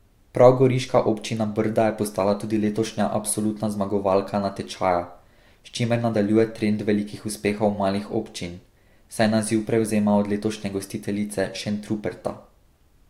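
Across the whole recording of speech there are no technical faults to point to at any moment.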